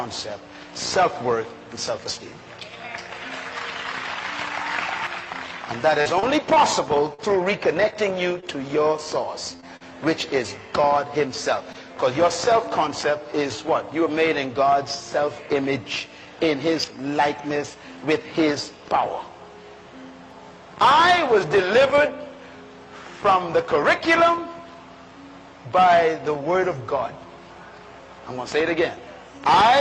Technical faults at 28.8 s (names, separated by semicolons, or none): none